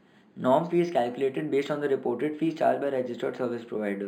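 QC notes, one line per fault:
throughout: imaging from linear upsampling. The speech sounds dull at the top, with a faint metallic shimmer on sibilants. The rate was raised by joining samples with straight lines, a weak filter that softens the upper band and leaves mirror copies of the spectrum. The first image sits between about 5.5 kHz and 11 kHz, roughly 35 dB below the signal, which points to a source rate near 11 kHz brought up to 48 kHz.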